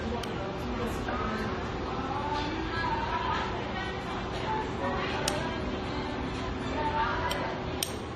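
Transcoding between lossy codecs runs throughout. Nothing remains above 13.8 kHz, and two layers of smeared, swirly artefacts sit together, likely Vorbis re-encoded into AAC-LC at low bitrates.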